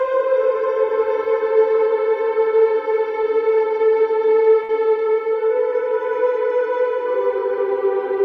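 At 4.63 s a burst of packet loss hits the stream: several consecutive packets, roughly 60 ms of audio, never arrive in time to be played. The receiver covers the hole by extending the last sound it had and letting it fade over about 52 ms, so a brief smeared, dying tail replaces the real signal. At 4.71 s the audio picks up again further along, with that stretch simply gone.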